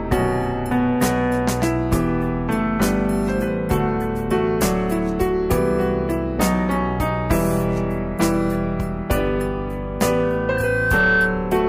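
A microphone picked up its own loudspeaker, so loudspeaker feedback squeal builds from 10.23 s into a 1.5 kHz howl, swelling within about 0.7 s to a few dB above the sound, until 11.50 s.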